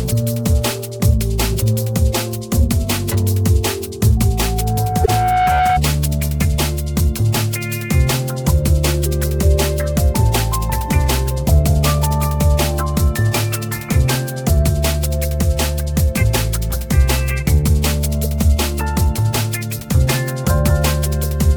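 From 4.17 s to 5.82 s a loudspeaker feedback squeal appears: a single tone at 737 Hz swells over about a second and a half until it sits at roughly the same level as the rest of the sound. The microphone is re-amplifying its own loudspeaker output. That steady growth on one pitch is what separates it from a fixed interfering tone or hum.

Partway through the squeal, from 5.03 s to 5.09 s, there is damaged data in the compressed stream. The decoder misreads corrupted frames and resynchronises, producing a brief disturbance.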